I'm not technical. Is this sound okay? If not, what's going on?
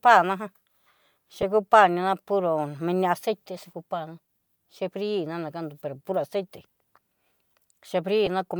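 No. There are two brief lost LE Audio frames, at 1.42 s, just before "kupa nina puro mini", and again at 8.26 s. Each gap is about 10 ms, which points to one missing wireless frame. Instead of going silent or clicking, the speech is briefly patched with a noisy smear of the previous sound.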